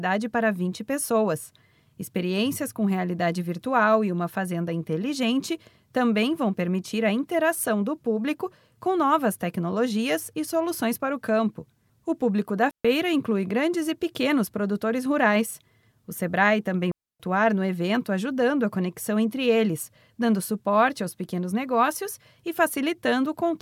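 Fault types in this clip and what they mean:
Digital wireless dropout: the radio link lost too much data, so the receiver muted the speech. It happens twice, at 12.71 s for 0.14 s and at 16.92 s for 0.28 s. Each gap is a clean near-silence. No noise burst comes before or after.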